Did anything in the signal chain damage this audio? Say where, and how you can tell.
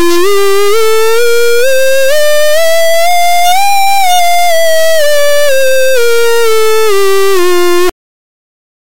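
Yes, at the sample-format conversion stage: integer read as float, running through the whole music clip. It is a harsh, extremely loud buzzing square wave that drops to silence in the quietest passages. Samples written as 32-bit integers are being read as 32-bit floats, so most values decode as nearly zero or far beyond full scale.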